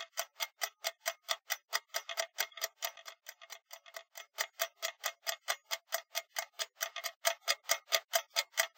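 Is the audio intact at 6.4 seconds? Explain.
Yes, the sound at 6.4 seconds is intact, with no dropout, click, distortion or other fault at that moment.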